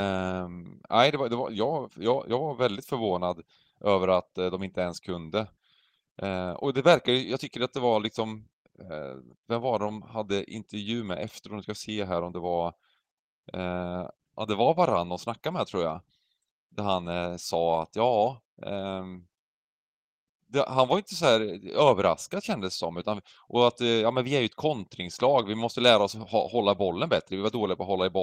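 Speech, with no technical faults to be heard anywhere in the recording. The audio holds steady throughout, without dropouts, interruptions or anything that breaks the continuity of the sound.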